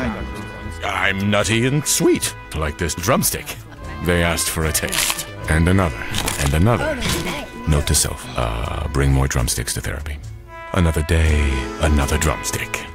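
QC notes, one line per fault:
3.12–8.71 s, sample clock jitter: a fine hiss and roughness riding loud, bright passages, roughly 25 dB down, from sample timing wandering by around two microseconds.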